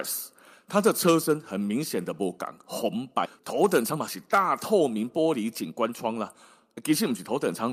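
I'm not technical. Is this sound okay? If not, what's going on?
No. Around 3.25 to 3.40 seconds there's a skip ahead. Part of the speech, about 0.7 of a second, was lost on its way in or thrown away, so playback jumps straight to later speech with almost no gap.

From about 3.80 to 6.08 seconds comes a jitter buffer speed-up. The receiver had stored up too much delayed audio and caught up by snipping out tiny slivers. The speech plays about 12% faster at the same pitch, sounding rushed.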